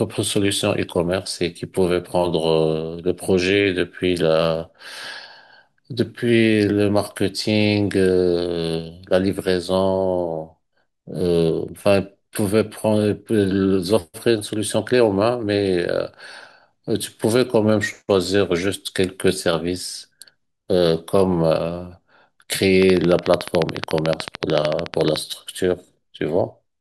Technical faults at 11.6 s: none

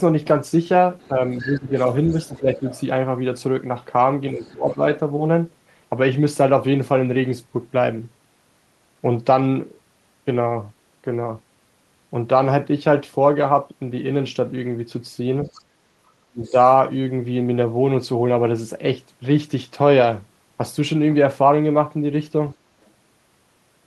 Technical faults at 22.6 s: other side's voice leaking through

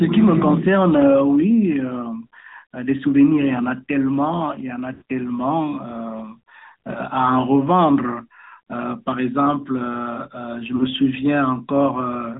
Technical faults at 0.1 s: AMR narrowband mobile codec

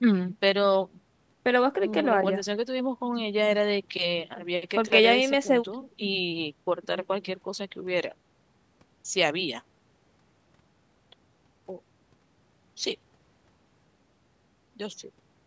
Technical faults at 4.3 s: none

